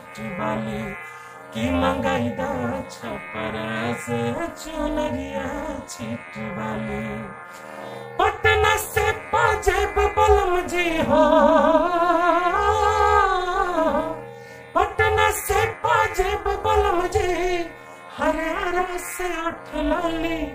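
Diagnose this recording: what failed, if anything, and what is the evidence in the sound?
Overlap-add ripple runs through the whole recording, from start to finish. The level swings by about 60 dB once per frame, at a rate of around 300 Hz, so the sound is chopped into a harsh, metallic buzz. The failure lies in frame-based processing, such as call processing or a resynthesis stage: the audio was split into windowed frames and rejoined with an overlap whose windows do not add up to a constant gain, leaving a deep dip between frames.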